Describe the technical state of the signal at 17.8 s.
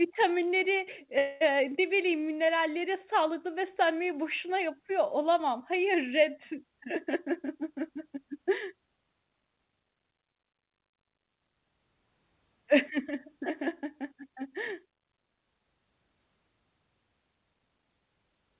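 At 17.8 s the signal is intact, with no fault, only the narrowband character of the call path, which carries nothing above 4 kHz.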